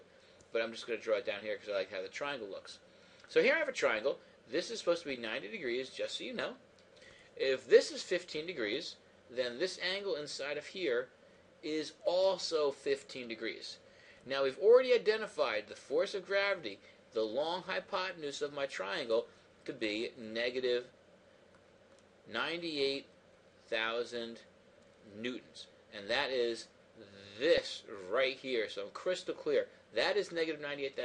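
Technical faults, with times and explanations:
27.58 s, DAB burbling: a brief burst of burbling where weak reception let bit errors through the error correction into the MP2 data. Corrupted samples put short blips of noise in single sub-bands, consistent with a few frames hit at an error rate of about a tenth of a percent.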